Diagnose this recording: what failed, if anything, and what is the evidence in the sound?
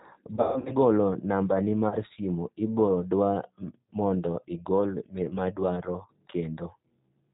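G.729 codec, throughout the clip: a codec-stage fault. Everything above 4 kHz is missing, and the speech has a plainly audible rough, synthetic grain. The 8 kbit/s coder rebuilds each 10 ms frame from a vocal-tract filter, a pitch predictor and a few pulses.

VoIP packet loss concealed by the speech codec, at 0.35 to 0.72 s and again at 1.89 to 1.96 s: a network fault. About 240 ms went missing across the first stretch, with a 150 ms run, and about 30 ms at the second. The decoder extended its last pitch and filter into a fading buzzy tone or coloured noise, and the frames that follow stay weak.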